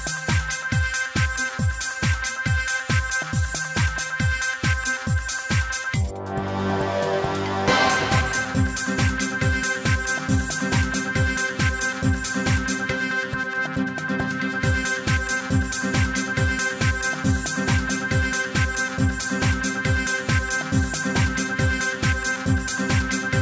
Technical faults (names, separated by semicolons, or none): none